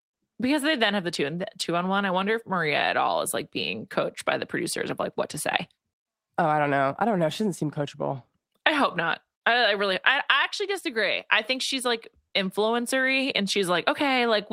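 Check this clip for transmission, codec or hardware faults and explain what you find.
Nothing faulty can be heard anywhere in the speech.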